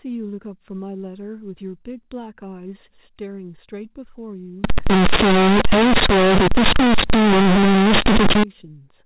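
A speech recording carried over G.711 telephone coding breaks up badly from 4.64 s to 8.43 s. There the sound turns into very loud, buzzy distortion, and the pauses fill with harsh noise. This is companded audio read as linear. The mu-law bytes are being played as plain 8-bit samples without expansion. Every sign change throws the output across about half its range. Quiet passages come out as loud as strong ones, and the waveform is badly bent.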